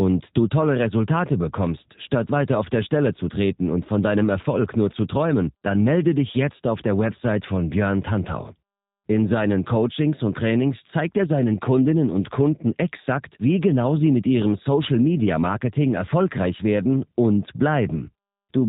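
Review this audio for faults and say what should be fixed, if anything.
G.729 codec damage runs throughout this speech clip and is plainly audible. The speech has been rebuilt from a vocal-tract filter, a pitch predictor and a few coded pulses per frame, which fits an 8 kbit/s G.729A link. Everything above 4 kHz is gone, leaving it dull, rough and faintly synthetic. To prevent it, record or route the call through a wideband codec at a higher bitrate instead of this narrowband one.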